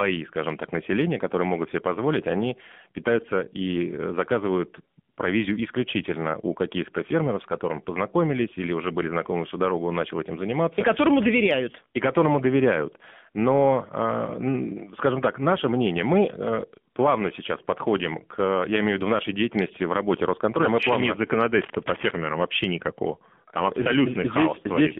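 Recorded speech heard through the AMR narrowband mobile codec for its whole length. The line passes only about 150 Hz to 3.5 kHz, so the sound is thin and muffled, and the low-rate vocal-tract model gives it a buzzy, synthetic edge that fits a mode around 7.4 kbit/s. Unlike simple band-limiting or a lossy music codec's smeared highs, the damage here is a coded, plainly audible robotic buzz in the sound itself. AMR comfort noise appears twice, in two very short gaps: from 5.14 to 5.18 s, just before "провизию исключительно у", and from 16.94 to 16.96 s, just after "наше мнение мы э". In each gap the real background drops out and is replaced by a smooth, even hiss, which then switches back to speech. That on-off swap to a steadier noise is what separates it from a plain dropout, which would leave silence, and from a noise gate, which only lowers the level. Between 21.6 and 22.16 s, after "мы еще плавно нет" and before "вообще никакого", cable scratch noise adds a dense, uneven rustle roughly 10 dB below the speech. 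It is likely caused by a worn cable or connector being moved. Its ragged, granular texture sets it apart from the smooth comfort noise and from isolated clicks.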